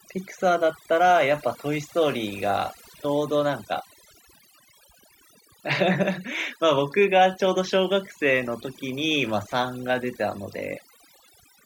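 Across the whole clip, the speech shows overdone noise removal: a noise reduction stage set far too aggressively pulls individual frequency bands down whenever they sit near its noise estimate. Between phrases the background collapses to near silence with twinkling specks.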